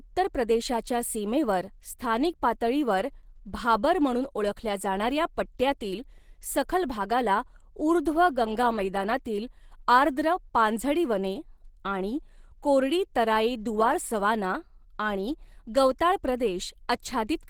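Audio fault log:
throughout: Opus compression. The speech sounds hoarse and somewhat muffled, with a rough, grainy texture and plainly audible coding damage, though content still reaches about 20.3 kHz, so the bandwidth has not narrowed. This is likely low-rate Opus encoding in its hybrid mode, which codes the lower band with the speech coder and fills the upper bands coarsely. The roughness points to a bitrate near 16 kbps, too few bits to keep the fine spectral detail.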